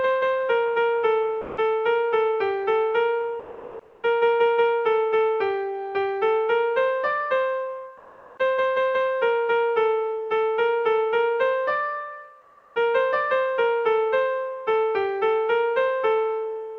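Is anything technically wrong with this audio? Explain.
Yes. Sound dropped by the voice detector at 1.41–1.57 s: a 160 ms stretch vanishes into steady noise, likely Opus DTX misjudging it as background and stopping transmission.

Comfort noise in place of the background at 3.39–4.03 s, 7.97–8.37 s and 12.41–12.75 s: the background, about 35–39 dB below the loud parts, becomes flat synthetic hiss. This is likely DTX pauses filled by the receiver. The level shifts by about 7 dB at 7.97 s and about 4 dB at 12.41 s, with no level change at 3.39 s. The top end, capped near 8 kHz, fits an Opus call path.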